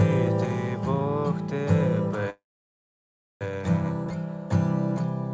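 From 2.30 to 3.44 s there is a call audio freeze. A brief fading buzz turns to silence. Packets likely stalled. The sound then resumes intact, about 1.1 s late.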